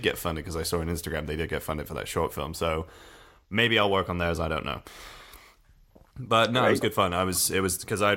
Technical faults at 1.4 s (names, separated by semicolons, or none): sample clock jitter